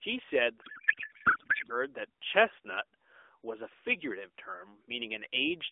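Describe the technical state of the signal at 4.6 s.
At 4.6 s the signal is intact, with nothing faulty at that moment beyond the narrow telephone-band character of the AMR narrowband mobile codec the speech is carried through.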